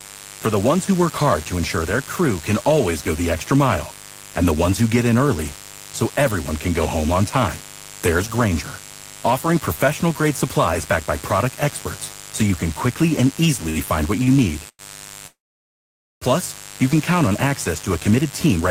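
Interference from switching spikes at twice the 50 Hz mains rate runs under the whole of this speech recording, with harmonics climbing into the kilohertz range, so a steady raspy mains buzz sits about 20 dB below the talker throughout. Packets arriving late then starve the receiver's jitter buffer twice: from 13.69 to 13.79 s and from 14.24 to 14.30 s the last sound is stretched by 64 ms and 32 ms respectively. These short stalls from a late packet hold a sound too long without losing any of it. Longer interruptions follow, and a likely cause is packets held up in transit that empty the buffer entirely. These call audio freezes stretch the last sound into a fading buzz that drops to silence, for 100 ms from 14.69 to 14.82 s, including about 50 ms of silence, and for 945 ms from 15.27 to 16.24 s, including about 860 ms of silence. Afterwards the speech resumes where it left off, with a gap inserted. 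Finally the buffer, now holding more than its target, trims short pitch-period pieces to catch up. This jitter buffer speed-up from 18.11 to 18.62 s plays the audio at 120% speed at unchanged pitch, dropping about a tenth of a second and sounding hurried.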